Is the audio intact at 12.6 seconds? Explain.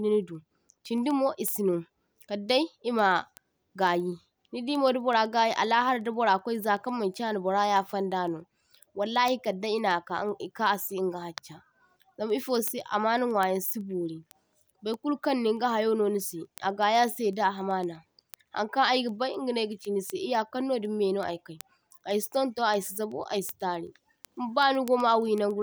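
No. Word clock ticks run from 0.23 s to 25.5 s, covering 12.6 s. The receiving device's clock drifts against the sender's, on the order of 150 ppm. Each slip drops or repeats one sample, heard as a sharp tick roughly every 0.15 s.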